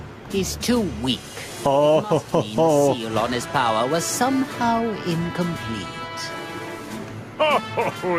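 Right from the start and all the way through, there's gain pumping. The level keeps swinging by something like 10 dB. The likely cause is input gain set far too hot, with a fast limiter or compressor clamping down on every peak. Loud and soft parts end up squeezed together, and the whole thing sounds squashed and breathing.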